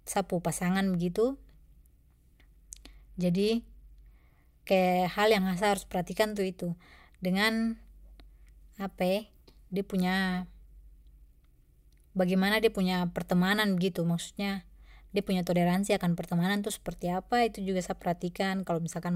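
A Bluetooth SBC bit pool drop runs from 2.71 to 4.91 s in this speech clip. For those two seconds the treble goes dull and a gritty, granular noise rises under the speech, then clears as the rate recovers. The sound points to the link stepping the encoder's bit pool down hard, consistent with a fall from 31 to 14, near 99 kbps. With so few bits, the upper sub-bands get almost nothing and the remaining bands are coarsely quantised.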